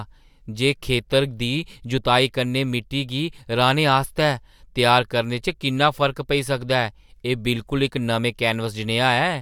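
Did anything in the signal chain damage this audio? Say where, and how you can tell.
No, nothing in the chain audibly damaged this speech.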